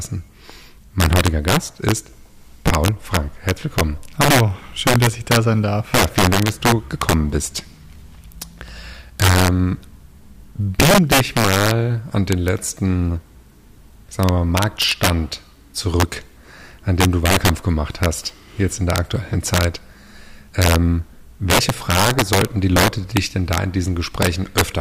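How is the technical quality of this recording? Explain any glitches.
The recording is marred by integer overflow throughout. The signal was driven about 6 dB past full scale, and instead of being limited, samples exceeding the integer maximum wrapped to the opposite sign. Around one percent of samples flip across the full range, producing violent, sharp cracks on every loud peak.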